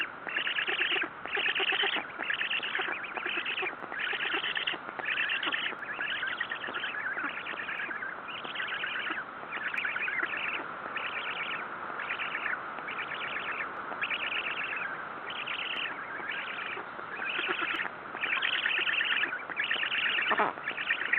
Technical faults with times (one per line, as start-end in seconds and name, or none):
1.80 overlap between stream segments
3.80 overlap between stream segments
5.79 overlap between stream segments
7.78 overlap between stream segments
9.78 overlap between stream segments
13.77 overlap between stream segments
15.76 overlap between stream segments
17.76 overlap between stream segments